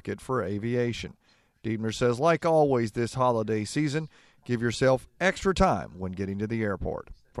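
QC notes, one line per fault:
No faults found in this speech clip. Nothing here needs a timed entry.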